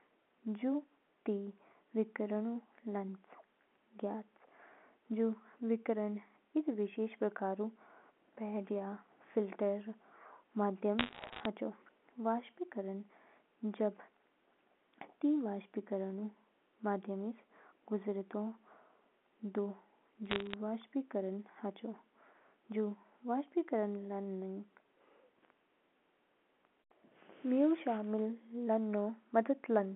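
Bit errors on a digital phone line appear from 10.99 to 11.46 s and again from 20.26 to 20.54 s. Single bits in the A-law samples of the 64 kbps G.711 path were flipped, each corrupting one sample. Where a sign or high-order bit is hit, the sample jumps far from its true value, giving a sharp tick. The first burst is denser, at roughly one bit in a hundred and fifty. Both bursts sound like brief crackle laid over the narrowband telephone speech.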